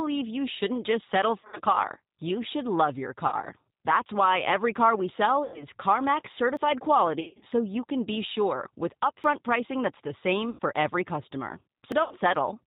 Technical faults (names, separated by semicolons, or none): G.729 codec; VoIP packet loss concealed by the speech codec; dropped buffer (overrun)